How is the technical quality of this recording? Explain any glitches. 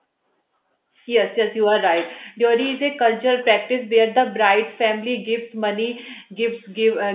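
No glitches to explain: the speech comes through a narrowband telephone channel consistent with 8 kHz mu-law G.711 coding, so the band stops at 4 kHz and a faint quantisation hiss rises and falls with the level, as that format does.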